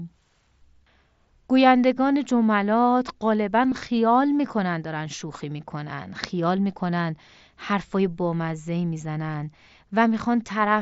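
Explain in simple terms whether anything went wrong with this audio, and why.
Concealed Bluetooth headset packet loss occurs at 3.70 to 3.72 s and at 9.33 s. Short bursts of sound, about 22 and 15 ms long, never arrived from the headset, so the phone patched each gap by repeating a matching scrap of the speech just before it. The patches are brief, so they show up only as short buzzy blips through the wideband mSBC headset sound.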